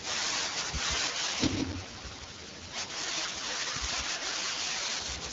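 From the start and running through the whole speech clip, a doubled audio track is present: a second full-band copy trails by around 150 ms at about 5 dB lower, most likely from a second capture path or an edit holding two copies. It sounds like a dry slapback with no room colour, and the waveform shows each onset repeated as a fainter twin.

From 1.07 s to 5.06 s an AMR rate drop roughens the speech into a raspier, more synthetic texture, which fits the codec stepping down from 12.65 to 6.6 kbit/s. There is no gap and the band stays the same, but a spectrogram shows smeared, noisier harmonic detail below 6.4 kHz.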